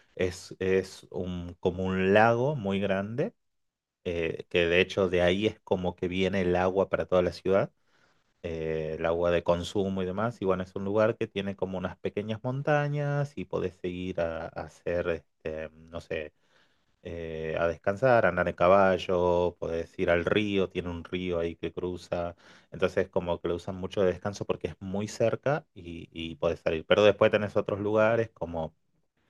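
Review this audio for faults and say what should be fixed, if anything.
No faults were found, so nothing needs fixing.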